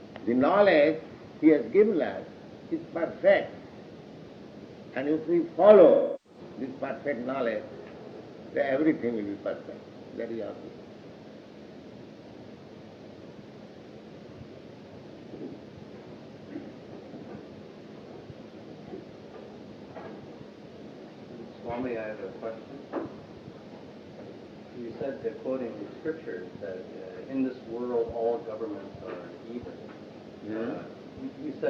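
From 5.90 to 6.39 s, roughly a third of a second fits about eight lost AAC frames and AAC frame loss with concealment. The decoder rebuilds the gap from the last good spectrum, so the sound smears rather than cutting to the hard silence of a plain dropout.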